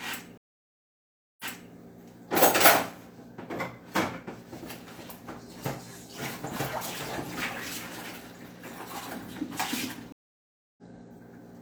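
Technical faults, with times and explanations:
0.38–1.72 s, stream reconnect: the sound cuts to about 1.02 s of silence, then fades back in from a point 325 ms earlier, as the player rejoins, starts a fresh decoder mid-stream and the server resends a burst.
10.12–10.83 s, stream reconnect: 652 ms of silence, then the sound resumes roughly a fifth of a second further on, the live stream having moved ahead while the player reconnected.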